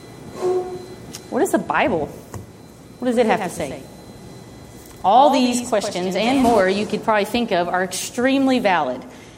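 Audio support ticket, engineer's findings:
Doubled audio track, 3.11 s to 6.61 s. Second full-band copy trailing the original by around a tenth of a second, about 10 dB down. Likely a second capture path running slow, or an edit leaving two offset copies. Not echo or reverb: no decay, no room colour, one repeat only, and it switches on and off abruptly at both ends.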